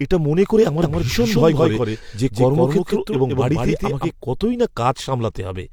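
A doubled audio track runs from 0.82 s, right after "এটা মনে করে আমার", to 4.10 s, just before "কতই না". A second, equally loud copy of the speech trails about 150 ms behind, likely from a slower capture path, and it switches in and out abruptly, with no room decay.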